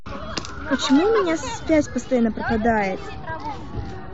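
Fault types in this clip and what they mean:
DC offset: the whole speech waveform sits shifted away from zero by a constant amount, here about -36 dBFS, for the full length of the clip. It cannot be heard as a sound in itself; it shows as a steady spike at 0 Hz in the spectrum and eats a little headroom on one side of the waveform. Unlike low-frequency hum or rumble, it has no pitch or movement and never varies over time.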